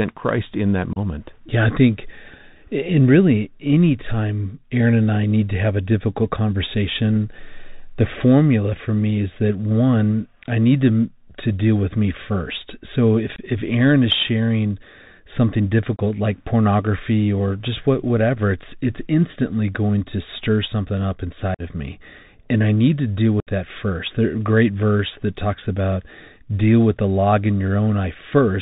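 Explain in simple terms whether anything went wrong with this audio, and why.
The whole recording went through the Bluetooth CVSD headset codec, the narrowband one-bit-per-sample format that headsets use for calls. Nothing above 4 kHz survives, so the speech sounds muffled. The codec's adaptive steps can't keep up with fast, loud high sounds, which leaves s sounds scratchy and a gritty hiss underneath.

Five short dropouts come from unconcealed Bluetooth headset packet loss. They occur at 0.93 s (30 ms), 13.36 s (22.5 ms), 15.96 s (22.5 ms), 21.54 s (45 ms) and 23.40 s (67.5 ms). Each time, small voice packets between headset and phone were lost and never patched over, leaving abrupt holes in the speech.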